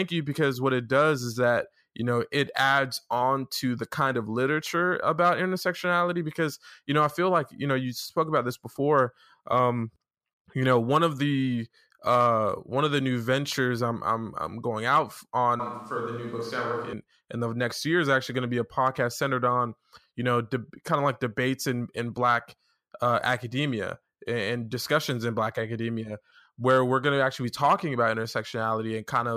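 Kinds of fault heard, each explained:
Switch to a distant microphone: from 15.6 to 16.93 s speech turns roomy and hollow, about 5 dB quieter with less bass, likely a farther microphone taking over. Spectrogram shows faded low bands, smeared tails and a raised noise floor; waveform, a sudden step down.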